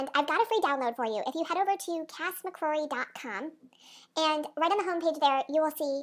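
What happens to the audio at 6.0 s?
At 6.0 s the speech is still affected by the wrong sample rate that runs through the whole clip. Playback runs about 1.45 times too fast, raising pitch by about 6.5 semitones, so voices sound high and hurried, which fits 22 kHz material played at 32 kHz without conversion.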